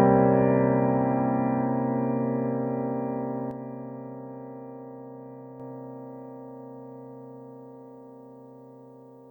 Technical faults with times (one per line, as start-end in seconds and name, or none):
3.51-5.60 sudden gain jump